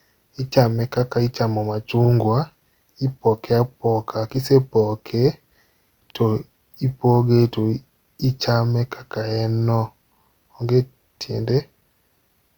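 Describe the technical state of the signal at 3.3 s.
At 3.3 s the signal is intact, with no audible fault at that moment.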